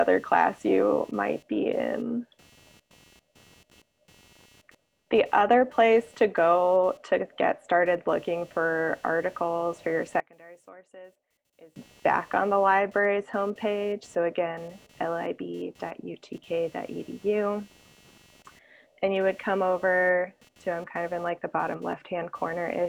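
Throughout the audio runs computer activity noise: a buzzing chirp pulsing at roughly 200 Hz, around 35 dB below the signal, from processor or peripheral load shifting the shared audio ground. On a spectrogram it appears as a comb of harmonics spaced near 200 Hz. From 10.20 to 11.76 s the level drops by about 24 dB, leaving a faint residue. That is likely one channel inverted, with the common content cancelling in the mono sum. The waveform shows a sudden narrow band between those times.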